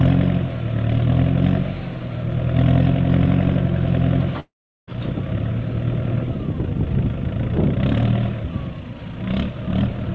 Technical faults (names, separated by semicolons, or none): long network dropout